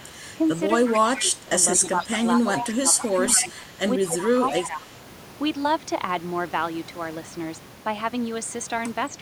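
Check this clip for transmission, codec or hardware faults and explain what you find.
Two faults are audible in this speech clip: a delayed echo of the voice, and stretches where the talker is pushed down while the far end is active.

Echo leak, at 0.00–0.06 s, 0.85–1.23 s, 1.75–2.06 s and 2.37–4.66 s: a copy of the speech trails about 220 ms behind, around 15 to 30 dB under it. This likely comes from a loudspeaker echo canceller letting residual pickup pass back down the line.

Speech suppressed in double talk, across 0.96–3.58 s and 4.08–4.89 s: the voice sags and thins, dropping up to about 15 dB, then about 10 dB, for roughly one and a half seconds and under half a second in total. This is likely an echo canceller attenuating everything during simultaneous talk.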